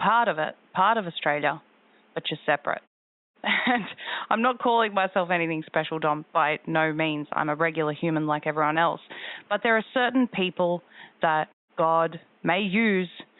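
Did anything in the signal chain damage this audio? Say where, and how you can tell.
No, nothing in this speech recording stood out as damage from any stage of the signal chain on listening.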